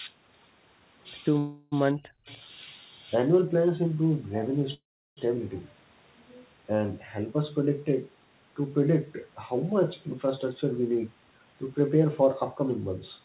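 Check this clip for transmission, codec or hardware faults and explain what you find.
Four kinds of fault are audible in this speech, which comes through a narrowband call path that stops at about 4 kHz, consistent with G.711 A-law at 64 kbps.

Call audio freeze at 1.38–1.74 s and 4.74–5.19 s: the speech stalls and the last sound is stretched into a fading buzz. At 4.74 s the buzz decays into about 0.35 s of silence. The speech then resumes where it stopped, with nothing skipped. The likely cause is packets held up in transit while the jitter buffer ran dry, adding about 0.34 s and 0.43 s of delay respectively.

Speech suppressed in double talk at 1.93–2.28 s: the voice drops sharply, by roughly 40 dB at its deepest. This is likely the echo canceller failing to separate the local talker from loudspeaker echo while both sides spoke, so it attenuated everything.

Echo leak at 2.28–2.39 s: a brief, faint, delayed copy of the speech appears about 0.3 s behind the original and about 30 dB below it. 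This likely comes from a far-end loudspeaker whose echo canceller let some of its microphone pickup return down the line.

Jitter buffer speed-up from 10.51 to 12.70 s: the speech runs about 7% fast at an unchanged pitch and sounds slightly hurried. The receiver trimmed tiny pitch-period slices in quick succession, removing about 150 ms in total, most likely to drain an overfull buffer.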